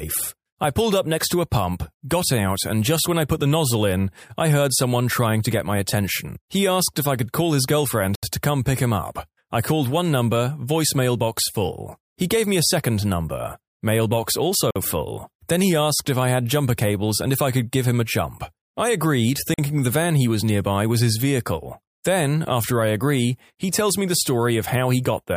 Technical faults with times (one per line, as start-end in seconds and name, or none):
8.15-8.23 Bluetooth stall
14.71-14.76 Bluetooth stall
19.54-19.59 Bluetooth stall